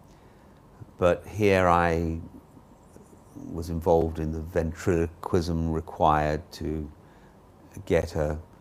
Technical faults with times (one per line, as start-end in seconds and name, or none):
4.01 gap between stream segments
8.02 gap between stream segments